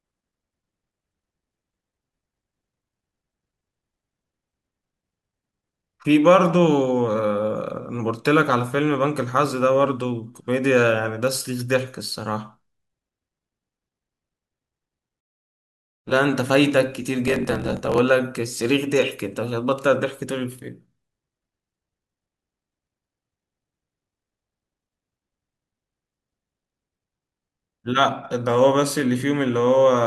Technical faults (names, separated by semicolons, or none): block size mismatch (truncated)